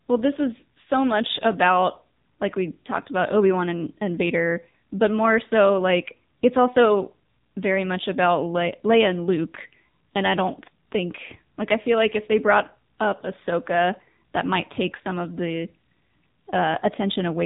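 Throughout, the speech carries heavy AMR narrowband mobile codec damage: nothing above 3.8 kHz survives, and the low bitrate, likely near 6.7 kbps, makes the voice buzzy and synthetic.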